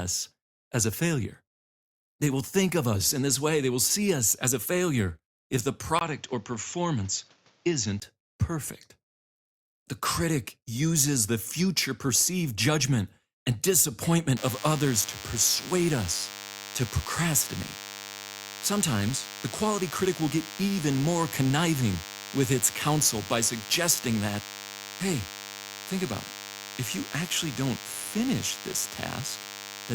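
Input switched to a poorer device, from 5.99 to 8.02 s, just after "a failure if the": a 20 ms gap, then quieter, duller speech with nothing above 7.6 kHz and faint new hiss, likely a change of microphone.

DECT cordless phone buzz from 14.37 s to the end: radio bursts every 10 ms are rectified into a thin 100 Hz buzz, about 15 dB below the speech.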